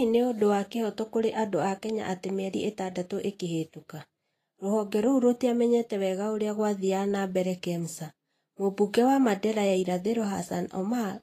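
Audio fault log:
Throughout, Vorbis compression: plainly audible hissy, grainy treble and blurred speech attacks, nothing above 14.2 kHz, likely from coarse high-frequency quantisation at a rate near 34 kbps.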